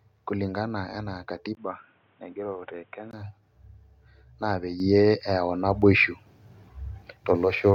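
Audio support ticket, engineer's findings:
1.55–3.13 s, after "kulingana enaa": speech goes dull, narrower band, faint new background noise, level roughly unchanged, 20 ms gap at switch. Input switched to a poorer device, likely another microphone or a headset call profile.

4.8 s and 5.82 s: microphone volume stepped up, about 8 dB then about 4 dB. Speech and background jump together. Call software raising input gain in discrete steps.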